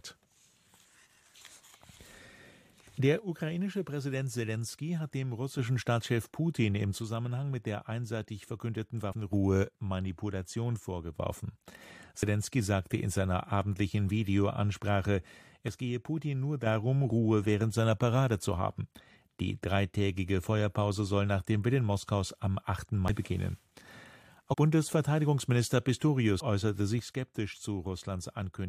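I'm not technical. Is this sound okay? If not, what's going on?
No. Two problems come and go.

One channel drops out from 3.19 to 5.59, 6.98 to 9.32, 9.64 to 11.20, 15.68 to 16.66 and 26.99 to the end. The sound suddenly gets quieter each time. The likely cause is one side of the stereo pair going silent.

Compressed frames are skipped at 5.81 to 5.84, 9.10 to 9.14, 12.22, 23.08 to 23.11, 24.50 to 24.55 and 26.38 to 26.42. Small chunks of the file are missing or damaged. The sound jumps ahead by a tiny slice, up to about 0.15 seconds.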